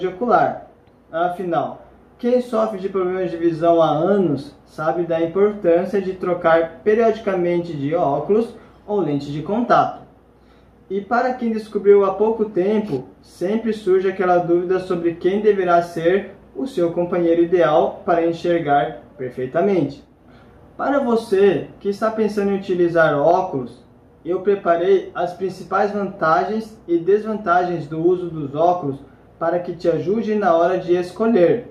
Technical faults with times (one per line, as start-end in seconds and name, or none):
none